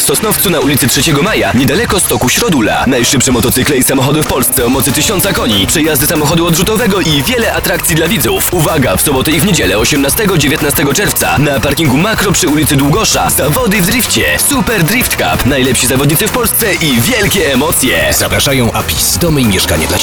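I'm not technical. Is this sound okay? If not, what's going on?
Yes, this one's fine: nothing in it sounds broken or glitchy, so there's nothing you need to worry about.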